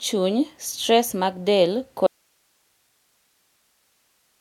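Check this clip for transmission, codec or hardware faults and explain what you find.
One fault is present. From 2.07 s to the end, the speech suffers an audio dropout to a faint residue. It likely comes from a signal break upstream with the path still live. It cuts abruptly to hiss, far below normal level.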